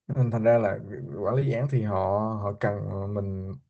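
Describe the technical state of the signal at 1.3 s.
A lost packet rebuilt from error correction, at 1.27 to 1.29 s: the next Opus packet's low-bitrate copy filled the 20 ms, so it sounds briefly rougher and noisier without a gap.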